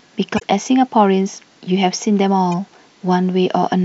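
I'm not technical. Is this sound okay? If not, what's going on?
No. Part of the compressed audio data was corrupted, a problem called damaged data in a compressed stream. When the player reaches the broken section, it can't read it properly, loses its place, and hunts for the next good piece of data. In this speech recording that produces a short chirp, squawk, click or gap from about 0.35 to 0.42 seconds, and a much briefer blip at about 2.52 seconds.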